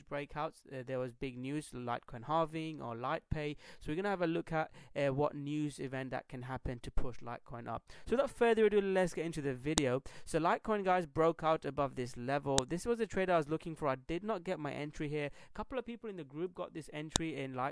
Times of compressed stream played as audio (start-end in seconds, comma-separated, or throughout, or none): none